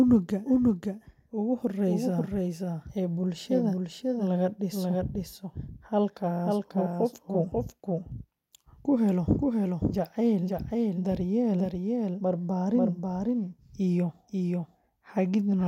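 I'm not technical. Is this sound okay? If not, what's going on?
No. There's a doubled audio track throughout: a slightly quieter copy of the speech trails about half a second behind, likely from the sound being recorded twice.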